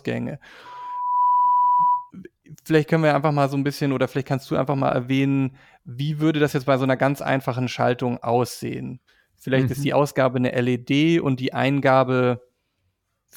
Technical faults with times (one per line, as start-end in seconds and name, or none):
0.65-2.11 loudspeaker feedback squeal